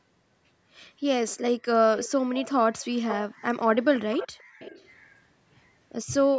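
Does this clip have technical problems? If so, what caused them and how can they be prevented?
Yes. A faint, delayed second copy of the speech trails behind it three times: from 1.96 to 2.09 s about 366 ms late, from 3.96 to 4.28 s about 402 ms late, and from 4.59 to 5.15 s again about 402 ms late. The first two sit about 15 dB below the main speech and the last about 25 dB below. This is likely an echo leak: the far end played the call on a loudspeaker, and its echo canceller let part of the microphone pickup return. Prevent it with headsets or a better-tuned echo canceller at that end.

From 4.33 to 4.59 s the room sound ducks sharply, by as much as about 40 dB, for roughly 300 ms, then comes back. This is background gated by the echo canceller: while the loudspeaker was playing, the canceller pulled the microphone down hard to suppress echo, taking the ambience with it. Less aggressive suppression, or comfort-noise fill during the gating, would prevent the audible hole.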